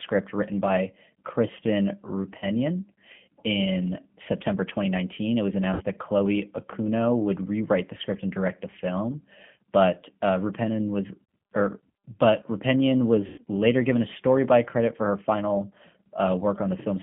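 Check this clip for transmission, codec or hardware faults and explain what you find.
Two faults: a low-bitrate codec on the whole clip and four patches of concealed packet loss.

G.729 codec, throughout: the speech is rebuilt from a filter plus sparse pulses at 8 kbit/s, in a narrow 150 Hz to 3.4 kHz band, so it sounds noticeably rough and synthetic.

VoIP packet loss concealed by the speech codec, at 2.38–2.46 s, 5.74–5.82 s, 11.25–11.29 s and 13.26–13.41 s: the decoder stretches the last sound over gaps of 40, 60, 40 and 120 ms, so you hear a buzzy or noisy, fading smear that lingers.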